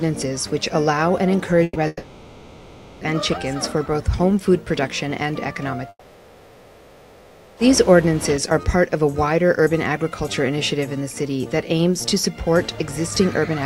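At 1.63 s the sound briefly freezes: the last moment is held as a buzz or hiss that fades over roughly 120 ms, with a brief gap of near silence before the audio resumes at 1.78 s a little further on. This is a burst of packet loss. A short run of packets was lost or arrived too late, and the receiver continued the last sound to cover the hole. About 120 ms of the original is missing.

Twice more the sound gives way to a stretched-out, decaying fill. The first runs from 1.87 s to 3.04 s and covers about 1.14 s. The second runs from 5.89 s to 7.60 s and covers about 1.68 s. After each, the audio picks up later, with that stretch gone. A brief silence sits at the join, very short in the first case and about 50 ms in the second. Each is likely a long network dropout: nothing arrived for over a second, so the receiver kept continuing and fading the last sound while the real audio for that span was lost.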